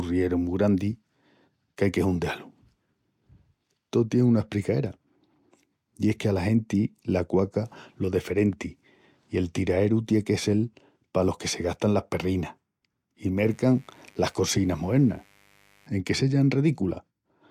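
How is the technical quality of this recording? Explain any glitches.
One glitch stands out in the speech. From 13.37 to 15.87 s a mains buzz appears: sharp switching spikes from a dimmer, rectifier or unshielded lead, repeating twice per 50 Hz cycle, spray harmonics into the kilohertz range. It sits well below the voice but sounds raspy, unlike a smooth, low mains hum.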